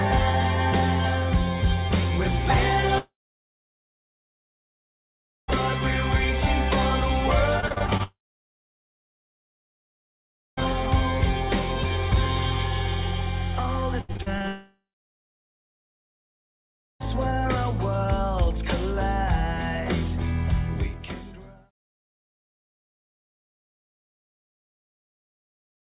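From 2.98 to 5.50 s, the first long network dropout hits. The sound stretches into a fading buzz, then goes silent for about 2.4 s. It resumes with that stretch missing. A likely cause is the network delivering nothing for 2.5 s.

From 7.60 to 8.01 s comes repeated packet loss. Seven short gaps, the longest about 41 ms, are each patched by continuing the last sound. Over 40% of this span is filled in, so it turns choppy and robotic.

A second dropout runs from 8.03 to 10.59 s, with about 2.4 s of silence after the brief fade.

Repeated packet loss returns from 14.01 to 14.46 s. There are six gaps, the longest 76 ms. It sounds choppy, with pieces missing.

A third dropout follows from 14.48 to 17.06 s. After the fading fill, about 2.2 s of silence is left.

Throughout, nothing sounds above 4 kHz. That fits a G.711 call codec at 64 kbps.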